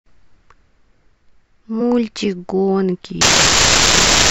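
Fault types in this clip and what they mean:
Compressed frames skipped: Whole chunks of the coded stream never get played, either because they're missing or because the decoder threw them out as damaged, so the sound just jumps forward. You hear it at 1.80 to 1.82 s, where a few frames' worth, roughly 70 ms, drops out, and again at 3.90 s with a shorter jump of about 20 ms.
Unreliable data bit: One line carrying the sample data is flaky, so that bit comes out wrong in a random scatter of samples. Each wrong bit throws in a spike of the same size, and together they make a steady crackly fizz. It starts at 3.21 s and keeps going right to the end of the clip. It doesn't let up in the gaps between phrases, which is the giveaway that it's in the data, not in the recording.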